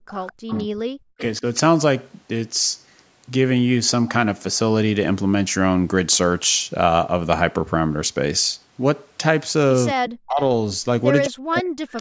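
Speech suppressed in double talk opens the clip at 0.00–0.04 s, where the voice drops by about 40 dB. The likely cause is an echo canceller that, with both sides talking at once, could not separate the local talker from loudspeaker echo and turned both down.

An echo leak follows at 0.09–0.65 s. A faint copy of the voice arrives 212 ms late, about 20 dB below the speech. This is likely loudspeaker sound that the far end's microphone picked up and its canceller failed to remove completely, so it was sent back.

Overlapping that echo and continuing after it, the double-talk suppression recurs at 0.48–0.82 s, 1.07–1.23 s and 1.40–1.45 s, where it is only a slight dip. It returns at 9.94–10.41 s and 11.26–12.01 s. In these stretches the voice sinks by about 40 dB or cuts out in pieces.

The echo reappears at 11.97–12.01 s, again 212 ms behind the voice and about 25 dB down.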